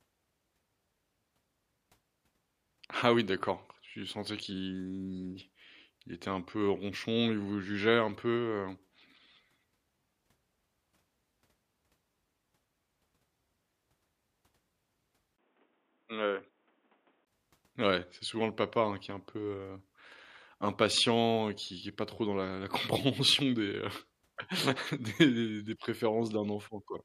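From 15.36 to 17.27 s the speech turns dull, boxy and slightly quieter, with nothing above 3.8 kHz, faint new background noise and a 20 ms gap, likely an input switched to a poorer device.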